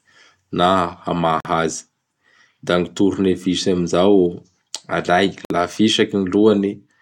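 Two brief silences cut into the speech, at 1.40 s for about 46 ms and at 5.45 s for about 53 ms, four seconds apart. Both have smeared edges, and the speech resumes where it stopped. Each is a gap at a join of encoded pieces, where separately encoded segments were spliced without trimming each run's leading delay and padded final frame.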